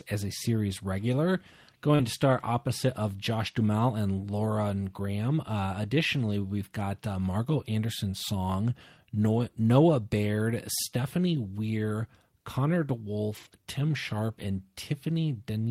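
At 1.95 to 2.01 s, short concealed packet loss: about 40 ms never arrived and was bridged by extending the preceding sound, which shows as a brief smear with smoothed, repeated spectral texture. Overlapping it, at 1.99 to 2.05 s, a lost packet rebuilt from error correction: the decoder played 40 ms of low-bitrate backup copies, heard as rougher, noisier frames with grainier spectrogram detail. The same rebuilt-from-error-correction roughness returns at 9.35 to 9.49 s (80 ms) and 13.33 to 13.54 s (100 ms). A second concealed loss at 13.49 to 13.63 s adds a little extra time and a short smoothed smear in the waveform.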